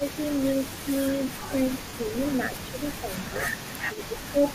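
A faint, delayed copy of the speech trails the whole recording by about 464 ms, around 20 dB below the talker. This is an echo leak, likely from a loudspeaker whose echo canceller let part of its microphone pickup return. From 0.0 to 0.21 s, 0.7 to 0.91 s, and 1.49 to 3.44 s, the speech dips by around 10 dB in short patches. That is speech suppressed in double talk, likely an echo canceller turning both sides down while they overlap. At 1.89 to 1.94 s a brief noisy smear replaces the sound for 45 ms, which fits roughly six lost LE Audio frames concealed by the LC3 decoder reusing the last spectrum. From 3.87 to 4.54 s the same double-talk suppression returns more deeply, around 15 dB, across roughly half a second.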